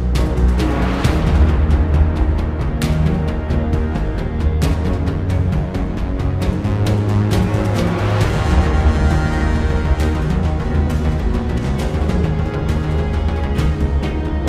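No technical faults can be heard anywhere in the clip. Nothing breaks up, drops out or cuts in at any point.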